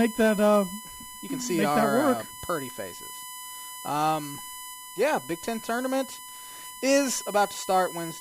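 USB whine runs through the whole of this speech clip as a steady 1 kHz tone, roughly 15 dB below the speech. It comes from the bus drawing current in 1 ms frames, which leaks in through power or ground as a fixed-pitch whine.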